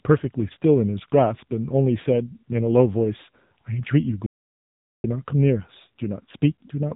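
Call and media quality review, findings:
Whole clip: speech passed through the AMR narrowband mobile codec, a vocal-tract model rebuilt from a handful of pulses per subframe at a low bit budget, consistent with a mode near 8 kbps. Result: nothing above 3.8 kHz, thin band-limited tone, plainly audible codec damage, buzzy, synthetic edge on the voice as the coarse excitation stands in for the real source.

4.26 to 5.04 s: audio dropout to silence, likely input loss upstream of the encoder (link failure, device drop or accidental mute) while silence kept being written. Sound cuts off mid-flow and resumes about 0.78 s later. The gap is silent with no room tone. Content in that window is unrecoverable.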